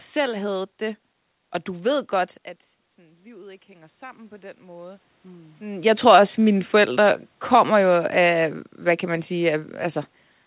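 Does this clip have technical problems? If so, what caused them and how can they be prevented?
Yes. From 2.96 s to 5.88 s, just after "du ved godt at", the voice and the room noise behind it swell together over almost three seconds. This is automatic gain rising. The input level had dropped by about 21 dB, and the automatic gain control responded by slowly raising its gain about 10 dB. Because it acts on the whole signal, the background climbs in step with the speech rather than the voice alone returning. To prevent it, set a fixed input gain and disable or slow the AGC so brief level drops are not chased.

From 5.95 s to 8.53 s, ending just before "hvad kan man", the audio starts too loud and then sinks gradually, background and voice together, through the narrow telephone band that stops at 4 kHz. This is automatic gain falling. When the level at the microphone came back up, the control still held its raised gain. 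It then backed it off by about 3 dB over more than two seconds, so the overshoot fades slowly instead of correcting at once. To prevent it, keep the talker at a steady distance from the microphone and use a fixed gain or an AGC with a faster, gentler attack.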